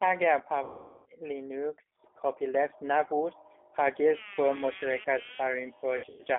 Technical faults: G.729 codec; VoIP packet loss concealed by the speech codec

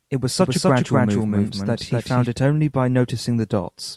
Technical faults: doubled audio track

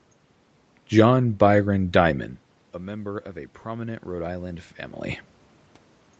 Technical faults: automatic gain rising

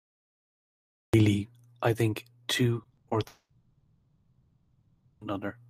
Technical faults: cut-off start; repeated packet loss (robotic sound); long network dropout

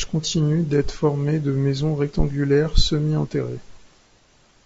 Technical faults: low-delay AAC compression

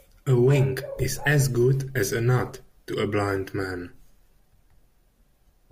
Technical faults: DAB burbling

